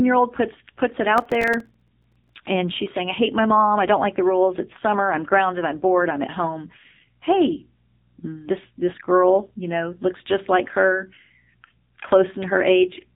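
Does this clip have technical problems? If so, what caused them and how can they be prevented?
Yes, two of them. The whole clip runs through the AMR narrowband mobile codec, and it sounds heavily squeezed. Nothing gets through above 3.8 kHz, so the speech is dull and boxy, and the vocal-tract model, fed by only a few pulses per subframe, leaves it buzzy and synthetic. The damage points to one of the lowest AMR-NB modes, around 6.7 kbps. To prevent it, record or route the call through a wideband path such as AMR-WB or a higher-bitrate codec.

From 1.18 to 2.35 s there's processor overload crackle, a gritty tearing over the speech. The machine kept missing its deadlines for tiny audio buffers, dozens of them in a row, and each miss dropped in a small slice of silence with hard edges. The spacing of the clicks fits very short buffers of roughly a millisecond or two. Stacked together, those gaps become the crackle, and it stops once the load drops. 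To avoid it, use larger buffers and keep other heavy tasks off the machine while it's recording.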